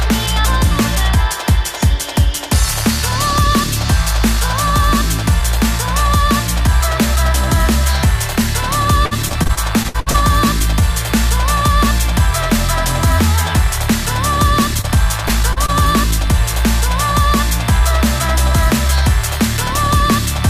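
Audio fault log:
9.05–10.16 s, repeated packet loss (robotic sound): ten short holes arrive in quick succession, the longest 61 ms, together about 320 ms missing. Each is patched by extending the preceding sound, so about 27% of this stretch is synthetic continuation, giving a choppy texture with pieces missing.
14.81–14.85 s, 15.27–15.31 s, 15.53–15.58 s and 15.66–15.70 s, short concealed packet loss: four brief dropouts of 20 to 40 ms each are filled by continuing the last sound and blending back into the real audio. Each is heard as a small smear or wobble, clustered around 14.8–15.7 s.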